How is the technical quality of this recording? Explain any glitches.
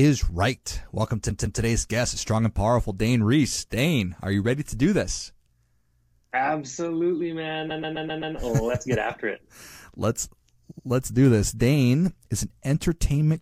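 The recording has a stutter problem from repeated frames, in three places. At 1.30 to 1.61 s a 157 ms chunk plays twice more. At 7.70 to 8.35 s a 131 ms chunk loops five extra times. At 10.70 to 10.86 s a 78 ms chunk repeats twice more. A short run of compressed frames got written or sent more than once, so the decoder replays the same slice and adds about 1.1 s overall. Each one is heard as a stutter.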